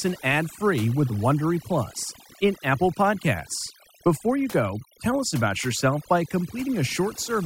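Throughout, the background breaks into twinkling, warbling specks: overdone noise removal, switching off bands near its noise estimate and taking quiet parts of the speech.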